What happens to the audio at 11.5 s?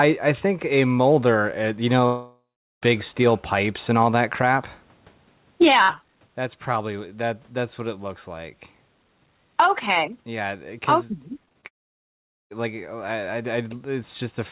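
The sound turns choppy from 11.45 to 11.65 s, with brief holes, the longest about 24 ms. This is repeated packet loss (robotic sound): successive late or missing packets were patched by extending the preceding sound, filling over a third of that span.

Underneath, the gain swings by roughly 10 dB, pulled down under each loud sound, flattening the dynamics. This gain pumping is likely caused by input gain set far too high, with a fast limiter clamping every peak.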